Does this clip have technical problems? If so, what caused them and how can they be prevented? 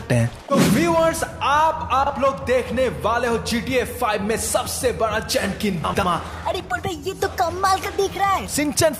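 Yes. Frames out of order occur twice: at 2.03–2.10 s two adjacent blocks of about 32 ms each swap places, and at 5.84–6.04 s two blocks of about 96 ms, which fits runs of three frames, swap. Each spot is heard as a brief garbled flutter, and no time is lost. A spectrogram shows hard vertical seams where the content steps backward and forward, and the waveform shows matching jumps. Sequence-numbered packets and a reordering jitter buffer prevent this.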